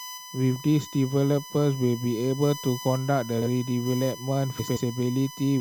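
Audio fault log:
throughout: USB whine. Current drawn by the USB bus in 1 ms frames is leaking into the audio path through shared power or ground. This puts a steady, fixed-pitch tone at 1 kHz, strongest at that fundamental, under the whole clip. It sits only about 15 dB below the speech.
3.38–3.47 s and 4.59–4.77 s: frames out of order. In each stretch two neighbouring blocks of coded audio arrived swapped and were decoded in that order. The first swap exchanges two blocks of about 42.7 ms each, which fits runs of two codec frames. The second exchanges two blocks of about 85.3 ms each, which fits runs of four frames. Each stretch sounds like a brief garbled flutter. No time is lost from the clip.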